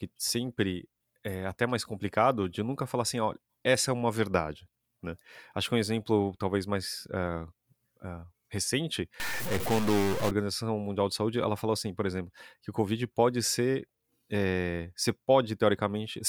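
From 9.2 to 10.31 s the speech turns harsh and buzzy, likely from a stuck bit in the converter or data line. Unlike clipping, the distortion doesn't follow loudness: even the pauses fill with gritty noise at about -30 dBFS.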